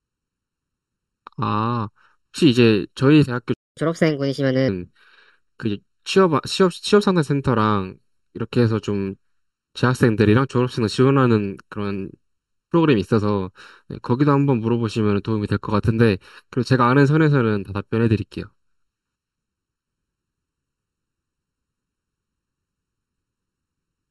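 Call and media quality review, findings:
Hollow, phasey speech through the whole clip. Channel delay (comb filtering): one channel lags by roughly 0.7 ms. The mono sum cancels shared content at evenly spaced notches, the first near 700 Hz. Probable component: stereo-to-mono downmix or capture path.

Audio cuts out mid-flow from 3.54 to 3.77 s, about 229 ms of silence, then resumes. Playback stall. Likely cause: player buffer underrun or a blocked audio thread halting output until recovery.

Speech rushed and raised in pitch from 3.77 to 4.68 s, then back to normal. Catch-up at higher speed: the player resamples its backlog at 1.25× to recover time lost in the stall, lifting pitch by roughly 4 semitones.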